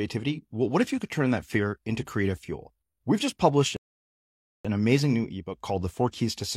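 At 3.77 s, after "just published", a rebuffering stall cuts the speech to silence until 4.65 s, adding about 0.88 s; playback resumes intact at "amazing new".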